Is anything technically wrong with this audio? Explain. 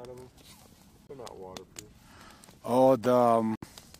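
Yes. Silence cuts in abruptly at 1.07 to 1.11 s and at 3.52 to 3.65 s: corrupt frame muted, where the decoder rejected damaged compressed frames, roughly one and then five, and the player substituted silence without shifting timing.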